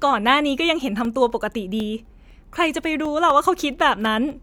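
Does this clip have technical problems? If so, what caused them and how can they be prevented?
Yes. From 1.05 s to 4.30 s the speech has periodic USB or driver dropouts. A short gap falls every 0.25 s, about fifteen in all. Each lasts around a millisecond and is filled with silence. They sound like a steady ticking under the speech. A background task is stalling the USB bus or the audio driver on a fixed cycle, so samples go missing each time. Prevent it by finding and disabling the background task, or by giving the audio device its own USB controller.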